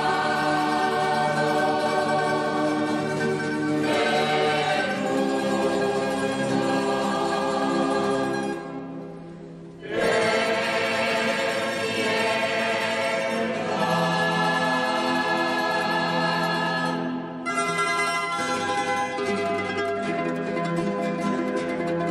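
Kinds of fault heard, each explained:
No audible faults heard.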